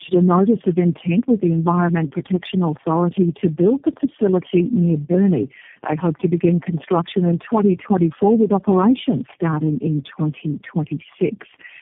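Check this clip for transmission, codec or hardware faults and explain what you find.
One transmission fault runs through the whole clip: tandem speech coding. The speech has been through about four low-rate speech coders in a row, each decoding and re-encoding the previous one's damaged output, so their errors stack. It sounds rough, muffled and warbly, with nothing above 3.7 kHz. A single low-rate codec would give some of that roughness, but not this buildup of smeared, watery texture. Simple narrowband filtering would be dull without any of the warble.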